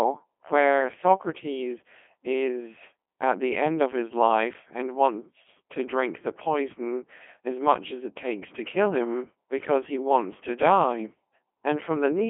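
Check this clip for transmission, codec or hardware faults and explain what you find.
One fault runs through the whole clip: Codec 2 vocoder coding. Only pitch, voicing, energy and spectral envelope survive, resynthesised from sine waves. The speech sounds heavily buzzy and robotic, consistent with a 2.4 kbit/s mode, confined to 300 Hz–3.4 kHz with nothing above 3.5 kHz.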